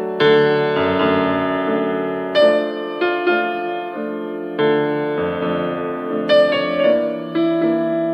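No technical faults can be heard anywhere in this audio.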